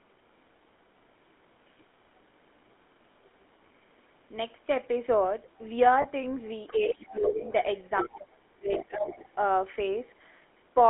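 Throughout, the speech carries the buzzy, gravelly roughness of the GSM full-rate codec, which fits a 13 kbps stream. Pulse-driven excitation that keeps only every third sample causes the grain, and the band is narrowed to about 250 Hz to 3.5 kHz. Unlike a merely band-limited line, the roughness persists even in clean passages.

At 1.78 to 1.84 s a very faint second voice appears, far below the talker. Its likely cause is the other side's voice leaking through, with the echo canceller leaving some loudspeaker sound in the microphone. It is a separate voice, not a distortion of the talker's own.

At 3.12 s and again at 6.02 s, lost GSM frames of about 20 ms each are heard. Both times the decoder repeats the last good frame's settings, giving a short metallic ring. This differs from suppression because the sound is held rather than dipped.

From 6.67 to 7.53 s the leaking voice returns much more strongly, only about 10 dB under the talker. 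Over 6.72 to 7.48 s the talker's voice sinks by up to about 15 dB, likely because speech is suppressed in double talk, with the canceller turning everything down while both sides speak. The pair repeats later. The talker drops by as much as about 30 dB across 8.03 to 8.72 s. Leakage follows at 8.73 to 8.86 s, another dip of about 15 dB comes at 8.88 to 9.07 s, and weaker leakage, around 15 dB down, lasts from 9.07 to 9.35 s. These dips lower the talker's level rather than holding the sound, and that separates them from the frame losses.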